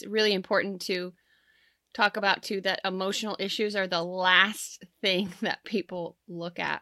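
No technical faults are audible anywhere in this recording.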